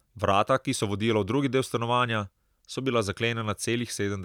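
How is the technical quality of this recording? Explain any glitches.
The speech recording has no technical faults. There are no glitches to explain, as none can be heard at any point.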